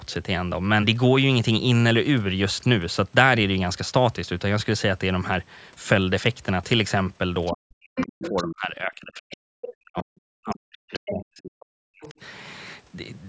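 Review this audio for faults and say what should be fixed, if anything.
The other side's voice leaking through shows up as five scraps of a second, fainter voice at 7.46–7.52, 7.97–8.44, 9.31–9.36, 10.93–11.25 and 12.03–12.12 s. The loudest, at 7.97–8.44 s, sits only about 5 dB under the main speech. The others fall between about 10 and 25 dB below. The likely cause is loudspeaker playback reaching the microphone and not being fully removed by the echo canceller. Prevention: use a headset, or retune the echo canceller's adaptive filter and residual echo suppression for this device's acoustic path.

Speech suppressed in double talk runs from 7.52 to 12.16 s. The main talker's level repeatedly dips and drops out, adding up to roughly 4 s of affected speech, with the deepest cuts reaching around 40 dB. This behaviour points to the echo canceller failing to separate near-end speech from the echo and attenuating both together. 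Prevention: improve double-talk detection so suppression backs off when the near-end talker is active.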